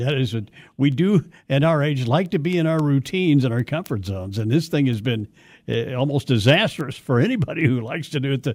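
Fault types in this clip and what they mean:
Word clock ticks: the speech was passed over a digital link into a device running on its own clock, not locked to the sender's, and the two drift apart by roughly 70 parts per million. Every time they slip past each other a single sample gets dropped or repeated, leaving a sharp tick. From about 0.12 s to 8.41 s you get around thirty of them, roughly one every third of a second, steady in rate but uneven in strength.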